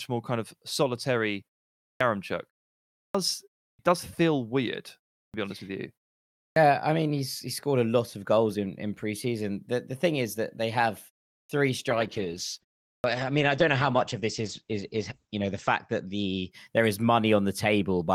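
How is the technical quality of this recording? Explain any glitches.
The recording has two kinds of glitch: repeated clipped starts after pauses and a stretch of degraded, muffled sound from a call bitrate drop.

Clipped start after a pause occurs at 1.92, 3.06, 3.71 (just before "does feel weird"), 5.26 (before "be honest with you"), 6.48 (before "I mean he's he"), 11.41 and 12.97 s. After each silence of roughly 0.3 to 0.6 s, the output device wakes late and swallows about 70 to 85 ms, so sounds begin abruptly. Unlike the pauses, these starts lose actual sound.

The call bitrate drop runs from 11.9 to 16.8 s. The encoder fell from 48 to 11 kbps, holding the lowest rate for about 3.4 s, and bandwidth shrank from 20 kHz to 8 kHz. Coarser coding makes the sound rough and muffled. Unlike a brief dropout, it persists continuously until the bitrate recovers.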